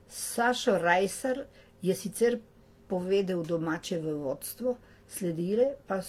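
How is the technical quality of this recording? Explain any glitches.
The quality is limited by stacked compression artefacts throughout the speech. The whole clip sounds dull, with the artefacts of more than one codec mixed together. This is likely transcoding between lossy codecs. The sound fits a Vorbis encode near 47 kbit/s re-encoded as HE-AAC near 40 kbit/s. The second codec wasted bits on the first codec's errors and added its own, so both sets of artefacts are heard together.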